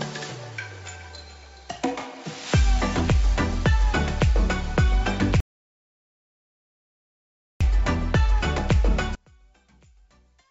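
The audio has passed through a call link, with nothing above 8 kHz, which points to a wideband codec such as G.722. At 5.40 s there is an audio dropout to silence lasting until 7.61 s. About 2.2 s of sound is lost. The gap is silent, with no room tone. Likely cause: the input device or link failed while the recorder kept writing. From 9.15 s to the end, one channel is inverted. Summed to mono, the shared content cancels and the level falls by about 36 dB. Only a faint residue remains. A likely polarity flip on one channel explains it.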